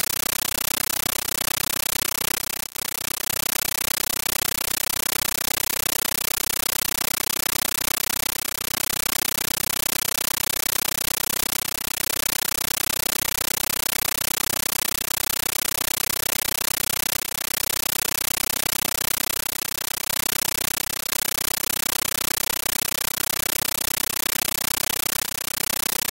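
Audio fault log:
Throughout: compressed stream played as audio, undecoded AC-3 becomes loud static bursts, 13.3 ms long, 31.25 per second, a rhythmic chatter unlike steady hiss.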